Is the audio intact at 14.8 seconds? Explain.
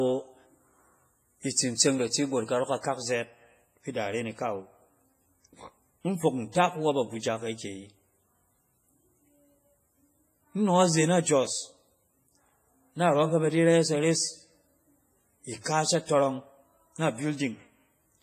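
No. At 14.8 s, as throughout the speech, there is heavy transform-codec damage, likely from WMA compression. Long encoding blocks smear quantisation noise across tens of milliseconds, so consonant onsets ring and a washy hiss breathes with the signal. The heavy damage points to a low bitrate near 24 kbps, with weak spectral lines zeroed. A spectrogram shows a hard ceiling at 15.4 kHz, patchy gaps between harmonics, and noise smeared before and after onsets.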